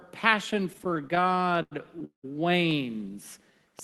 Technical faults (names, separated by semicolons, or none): repeated stalls (stutter); train of clicks